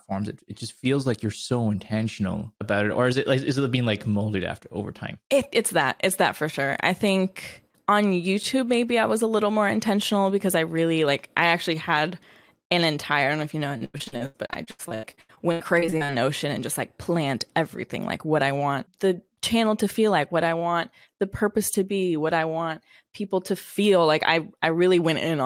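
From 13.77 to 16.12 s, just after "know if you know", the stream suffers repeated packet loss (robotic sound): audio keeps failing to arrive in time, and each hole is patched by stretching the sound that came just before it. The pattern suggests around two dozen separate dropouts, the longest about 92 ms, with roughly 39% of the stretch concealed. The speech turns choppy, with pieces missing.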